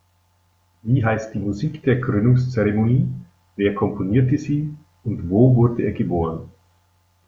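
No technical faults can be heard anywhere in this speech recording.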